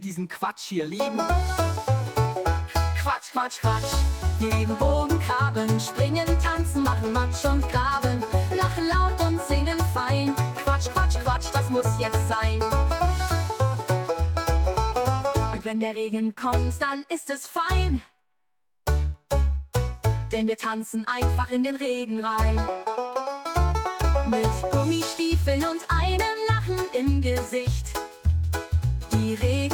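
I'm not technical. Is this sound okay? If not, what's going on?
No. At 2.25 s there is an underrun with held sample: playback briefly ran out of data, so the sound froze at its last level for less than a millisecond instead of dropping to silence. A sliver of audio was lost.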